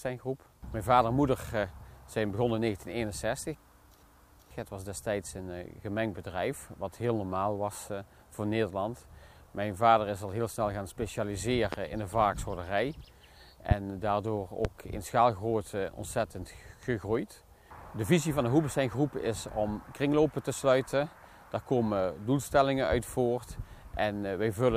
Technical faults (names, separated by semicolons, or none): loud pop